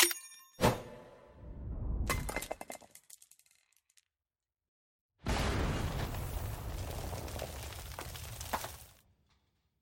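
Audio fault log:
No faults heard.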